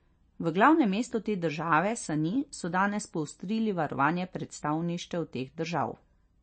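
Throughout the speech, the sound is watery and swirly, with nothing above 8.4 kHz. This is likely MP3 compression at a low bitrate, around 33 kbps, zeroing weak frequency lines that flicker between frames. That flicker sets it apart from a plain low-pass filter, which cuts treble cleanly without swirl.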